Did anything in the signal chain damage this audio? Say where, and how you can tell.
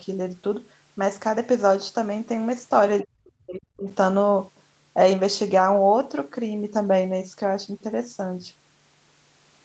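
Yes. Between 3.02 and 3.88 s the speech sinks sharply, falling by about 40 dB at its deepest, and is affected for roughly 0.7 s in total. The damage sits in the call processing. This is likely speech suppressed in double talk. The echo canceller heard both ends talking at once and could not tell this talker from the returning loudspeaker echo. It then pulled the gain down on both.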